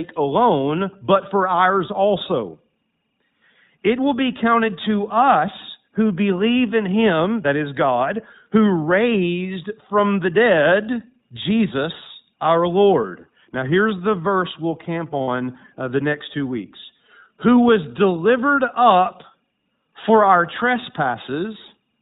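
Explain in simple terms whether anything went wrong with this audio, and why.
Throughout the recording the speech sounds thin and a little rough, almost synthetic, with no crispness at the top end. This comes from the iLBC codec, a narrowband phone-call codec that squeezes the voice into a small amount of data and cuts off everything above 4 kHz. It builds each short slice of sound independently, which leaves this slightly artificial character. Here that damage is plainly audible across the whole clip.

At 15.22 s, right after "the verse we'll camp", the voice briefly turns into a short held, buzzy, breathy hum lasting about 60 ms before "uh the next two". These are lost iLBC frames: some data packets never arrived, so the decoder filled the gap by repeating the last bit of voice with added noise. The gap's length fits about three lost frames. Because each iLBC frame stands alone, the speech snaps back to normal almost immediately.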